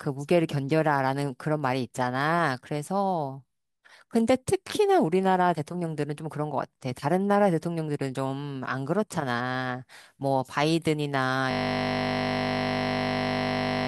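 A speech recording that, at 11.51 s, collapses into a hard, steady buzz lasting to the very end, about 50 Hz. This is a system hang loop. The computer or audio driver stopped supplying new samples, and the sound hardware kept replaying the last 20 ms of its ring buffer, well over a hundred times in a row. Because that piece is so short, its repetition fuses into a tone at the loop rate rather than a stutter.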